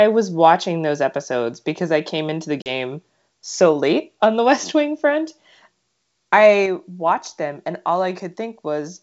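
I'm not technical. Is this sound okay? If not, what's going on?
No. At about 2.62 s, right after "I came into the", the speech cuts out for a brief instant, roughly 0.04 s, then comes back with a moment of roughness before it settles. This is packet loss on an ADPCM call. A couple of packets of sound never arrived and were filled with silence. The receiving end, which predicts each bit of sound from the last, briefly lost track and needed a moment to catch up.

At 6.66 s, just before "watched them and all", the voice and the background both get quieter in one sudden step and stay that way. This is the microphone volume stepped down. The calling software most likely judged the microphone too loud and turned its input level down all at once, so everything after that point is quieter. The wideband phone coding sounds clear, with only a faint trace of its own.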